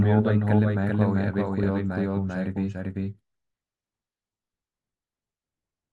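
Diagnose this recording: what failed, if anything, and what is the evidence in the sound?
A doubled audio track runs throughout: every syllable recurs around 0.4 s later at about equal loudness, full-band and dry. On the spectrogram, each speech pattern appears twice, offset horizontally. The likely cause is a second, slower capture or routing path mixing a delayed copy back in.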